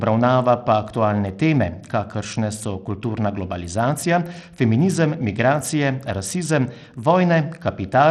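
Throughout the speech, the treble is thin and unstable. The top end drops out and flickers from moment to moment. A gritty, grainy noise rides on the voice, with a metallic aliasing edge. This points to Bluetooth SBC compression as the likely cause. The codec splits the sound into a few wide bands. With too few bits to share, the highest bands get starved and the rest are quantised coarsely. The damage is plainly audible, which fits a low bitrate near 80 kbps.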